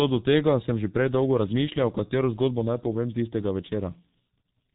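G.723.1 codec damage runs through the whole of this speech clip, from start to finish. The sound has no content above about 3.9 kHz, so sibilants and fricatives lose their hiss and the voice comes across muffled. Coding is heavy: with long 30 ms frames, the codec's voice model lags behind fast changes, leaving a hoarse, rough texture and smeared consonants that fit a very low bitrate near 6.3 kbit/s.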